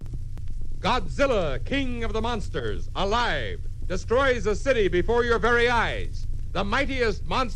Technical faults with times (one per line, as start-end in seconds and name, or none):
2.59-2.65 corrupt frame decoded